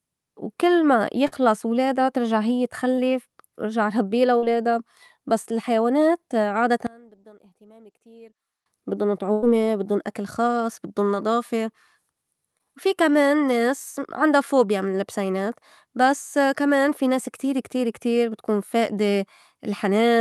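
A speech recording carried over a WebRTC call path, with Opus coding that limits the top end to around 12 kHz, consistent with a 64 kbps setting. It contains several packet-loss events and one mono-cancellation stretch. Short concealed packet loss occurs three times. At 1.27 to 1.34 s about 40 ms of audio is missing, and the decoder extends the preceding sound for 43 ms before blending back. At 2.96 to 2.99 s a 20 ms hole is covered with 15 ms of synthesised continuation. At 12.58 to 12.66 s 20 ms is lost, 10 ms is filled, and the timeline stretches slightly. Each one is heard as a brief smear or wobble where the receiver guessed at the missing signal. A burst of packet loss, which is longer, appears twice. At 4.37 to 4.44 s roughly 60 ms is gone, with 51 ms of decaying continuation. At 9.32 to 9.44 s a full 100 ms is lost and 99 ms is filled. In both, the concealment holds the last sound as a fading buzz or hiss, and the audio resumes further on with that stretch absent. 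From 6.87 to 8.66 s the level collapses by about 26 dB and the centred speech nearly disappears, leaving a faint residue. This is the signature of one channel inverted, the likely cause being one stereo channel with reversed polarity cancelling the shared content when the two are summed to mono.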